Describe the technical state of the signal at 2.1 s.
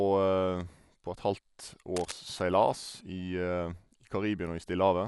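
At 2.1 s there is cable scratch noise, running from 1.96 to 2.12 s. Dense, uneven rustling sits about 10 dB below the speech. It likely comes from a worn contact being moved.

Dolby Digital compression is also present here. Nothing is heard above 11.4 kHz. The dull, fluttering roughness points to a bitrate near 64 kbps.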